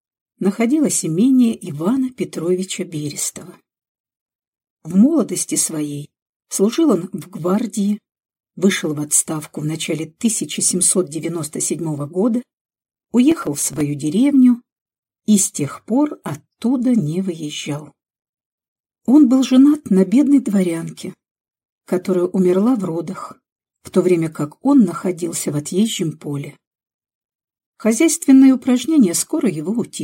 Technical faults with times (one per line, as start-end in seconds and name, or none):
13.31-13.81 processor overload crackle